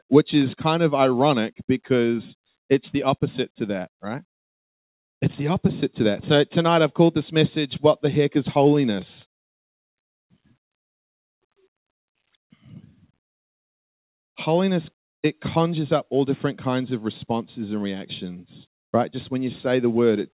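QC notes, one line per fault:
Nothing to flag on this one; it sounds like it came over a call line, with the narrow, phone-like top end you'd expect from a G.711 connection that carries nothing above 4 kHz.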